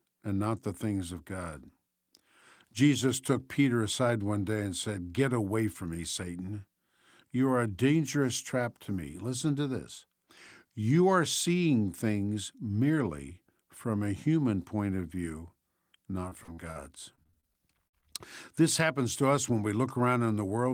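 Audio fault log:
16.29–16.77 s and 17.15–18.04 s, repeated packet loss (robotic sound): the speech breaks into rapid dropouts, none longer than 50 ms, each filled by extending the preceding sound, which gives a choppy sound with pieces missing. Unlike a single dropout, the holes keep recurring within fractions of a second.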